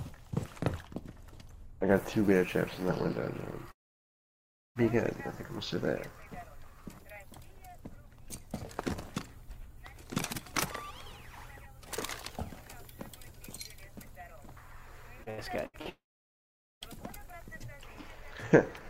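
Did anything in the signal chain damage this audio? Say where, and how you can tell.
Yes. Long network dropouts occur at 3.71–4.78 s and 15.89–16.84 s. Each starts as a brief fading buzz, then about 1 s and 0.8 s of near silence, and the sound resumes further on with that stretch skipped. The cause is likely a network outage, not a local stall.

Repeated packet loss (robotic sound) runs from 15.23 to 15.88 s, right before the second dropout. Four short holes, the longest 79 ms, are each patched by extending the previous sound, so about a third of that span turns choppy. Unlike a dropout, audio returns between holes.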